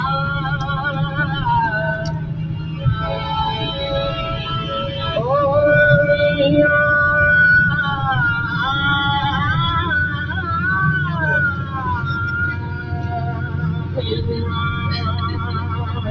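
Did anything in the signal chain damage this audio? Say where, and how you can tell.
Yes. At the call-processing stage, a noise suppressor designed for speech stays active on this non-speech sound throughout. It treats steady material as noise, so level swings by around 10 dB. The waveform envelope pumps, and the spectrogram shows held energy thinning while attacks stay intact.

The sound cut by the noise suppressor shows as four distinct dips: 2.11–2.84 s (about 5 dB), 11.56–11.75 s (about 4 dB), 12.54–14.02 s (about 5 dB) and 15.34–16.07 s (about 4 dB). Sustained or decaying parts get pulled down, visible as sagging waveform and faded spectrogram bands, within the call band that stops at 8 kHz.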